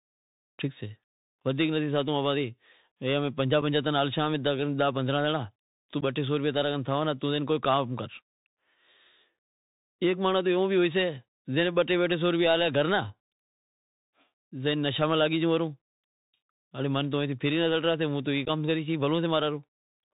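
Bluetooth CVSD headset codec runs through the whole speech: nothing above 4 kHz, scratchy s sounds and granular hiss, unlike a plain low-pass, which pointing to a 64 kbps one-bit link. Unconcealed Bluetooth headset packet loss cuts abrupt holes just after "سے پنجاہ" at 3.62 s (about 4 ms), at 6.01–6.03 s, and scattered across 18.45–18.50 s, as gaps with no smoothing.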